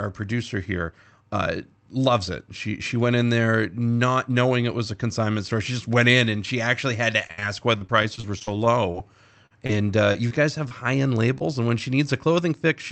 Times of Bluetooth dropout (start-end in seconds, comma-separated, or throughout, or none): none